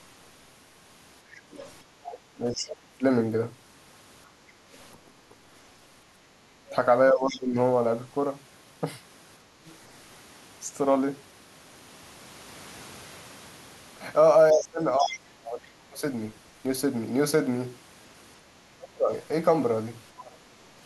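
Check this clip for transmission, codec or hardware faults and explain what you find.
Three kinds of echo-canceller fault are audible in this speech clip.

Other side's voice leaking through, at 1.35 to 1.68 s, 4.93 to 9.72 s and 14.55 to 15.19 s: a second voice sits some 15 to 20 dB under the talker. This is likely loudspeaker playback the canceller failed to subtract from the microphone signal.

Speech suppressed in double talk, at 2.0 to 3.04 s, 6.7 to 7.57 s and 14.52 to 20.41 s: the talker's level dips and breaks into pieces, by around 35 dB at worst in the first stretch. The likely cause is the canceller mistaking simultaneous speech for echo and attenuating both.

Background gated by the echo canceller, at 4.44 to 4.65 s: the room sound drops by about 6 dB for roughly a fifth of a second, then recovers. The canceller clamped the microphone while the loudspeaker was active and released it shortly after.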